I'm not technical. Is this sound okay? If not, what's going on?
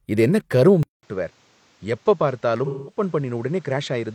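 No, there are two problems. At 0.83 s the speech drops out for about 0.2 s, then comes back duller, a bit quieter and with a new background hiss, and it stays that way to the end. That's likely an input switched to a poorer device, such as the recording jumping to a different, lower-quality microphone or headset that can't capture the crisp upper sounds.

Between 2.65 and 3.02 s there's a short patch where the speech sounds smeared and noisy. That's AAC frame loss with concealment: a few small chunks of the compressed audio went missing, and the player covered the gap by stretching out what it had just heard.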